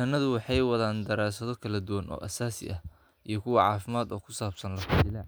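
No technical faults are audible anywhere in the recording.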